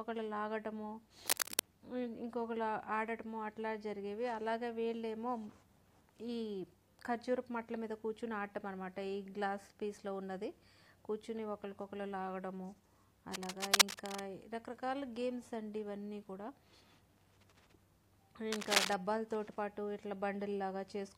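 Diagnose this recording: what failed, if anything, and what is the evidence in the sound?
Three bursts of dense, uneven scratching sit on top of the sound at 1.28–1.62 s, 13.33–14.20 s and 18.52–18.93 s, each a few decibels louder than the sound itself. This is likely cable scratch noise in the analogue wiring: a worn connector or cable shifting and making intermittent contact.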